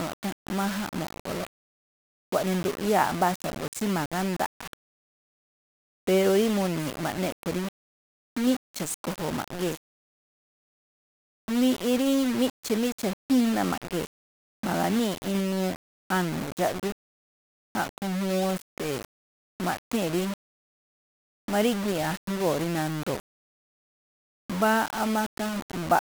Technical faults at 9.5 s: low bit depth without dither

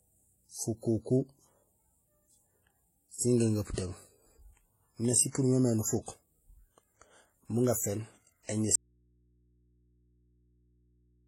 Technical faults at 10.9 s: transcoding between lossy codecs; audio dropout to a faint residue

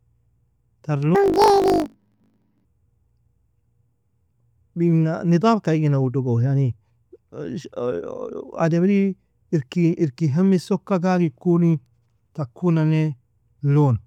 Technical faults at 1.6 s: planar audio read as interleaved

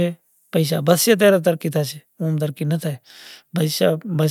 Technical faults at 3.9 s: none

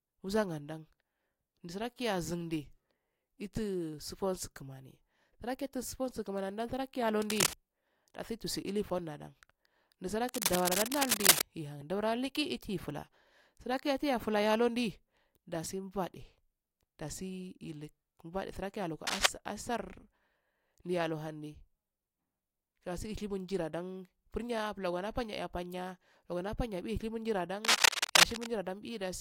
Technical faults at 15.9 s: none

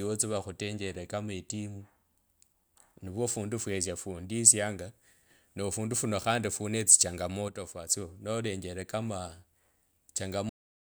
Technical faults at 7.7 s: sudden gain jump

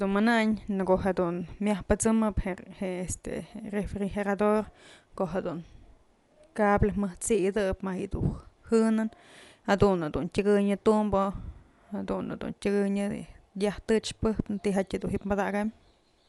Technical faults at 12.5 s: Dolby Digital compression

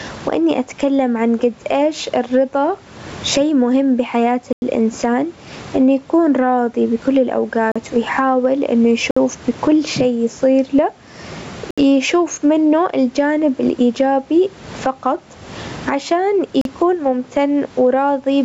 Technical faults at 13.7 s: gain pumping

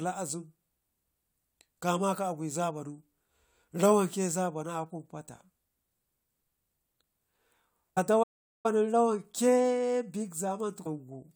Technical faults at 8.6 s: playback stall

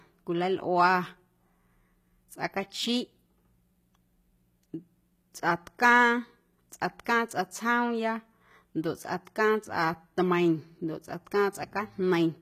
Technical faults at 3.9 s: HE-AAC compression

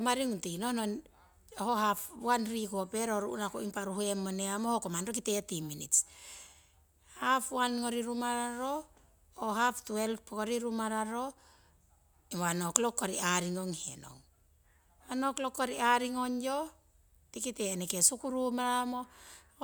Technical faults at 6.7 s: none

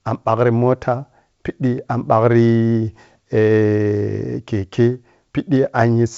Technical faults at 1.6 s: none

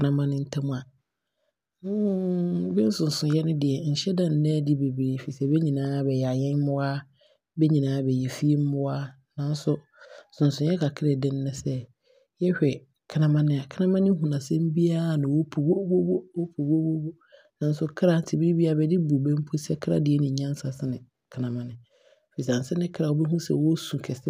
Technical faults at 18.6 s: none

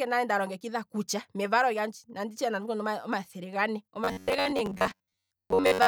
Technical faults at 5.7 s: robotic sound from repeated short buffers

